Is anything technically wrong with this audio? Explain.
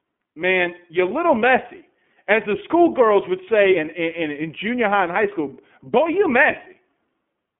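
Yes. Throughout, the speech has passed through the iLBC codec. It keeps only about 250 Hz to 3.4 kHz and codes each frame's excitation independently, which fits 30 ms frames at roughly 13 kbps. The result is a clearly rough, synthetic sound, not the clean dullness of simple band-limiting.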